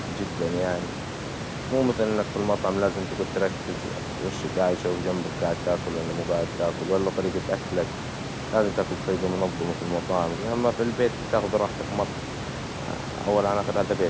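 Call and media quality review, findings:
No faults found on the call or media path in this speech recording. The call microphone processing leaves nothing above 8 kHz, and room noise sits about 10 dB below the speech.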